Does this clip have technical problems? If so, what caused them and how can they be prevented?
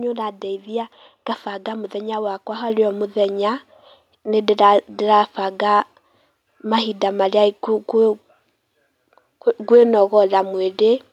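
Yes. Microphone volume stepped up at 2.7 s, just after "nĩũrandaithia ngabanga mũthenya wakwa": the call software judged the input too quiet and raised the device's gain in a single jump of about 6 dB, so speech and background noise get louder together. Prevent it by disabling automatic microphone level adjustment and setting the input gain manually before the call.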